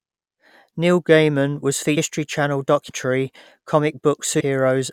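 Compressed frames skipped: the decoder dropped whole blocks of coded speech, which fits roughly 21 ms frames. At 1.96 s, 2.88 s and 4.39 s the speech leaps ahead by about 400, 300 and 200 ms.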